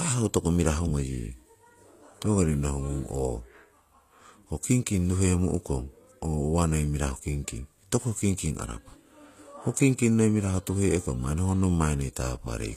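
From start to finish, the s sounds come out gritty and metallic, and the treble above the midrange has an artificial sheen, with nothing at all above about 14.9 kHz. The cause is likely HE-AAC compression: the codec spends its bits on the lower spectrum and fakes the top by copying lower bands upward, so the rebuilt treble fails to line up with the real harmonics, which fits a low bitrate around 24 kbps.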